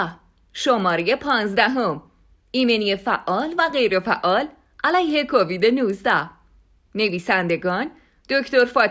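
Right from the start and all the way through, there's a steady tick running under the speech at 10 per second, one every 100 ms. That's the resampler restarted on every block. Each 100 ms chunk got converted on its own, and the drop in rate sounds like 48 kHz down to 16 kHz. At every chunk boundary the filter had no real neighbouring samples to work with, so each edge leaves a small error, heard as that regular tick.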